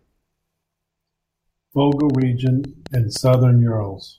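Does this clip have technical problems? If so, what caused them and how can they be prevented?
Yes. A train of clicks runs from 1.92 to 3.35 s, about ten sharp ticks at an uneven rate of roughly 7.8 per second, peaking near the level of the speech. The cause is likely interference from nearby equipment or a faulty connection or power supply injecting brief pulses. On a waveform they appear as narrow spikes. On a spectrogram they show as thin vertical broadband lines. To prevent it, keep cables away from interfering devices and use a stable interface.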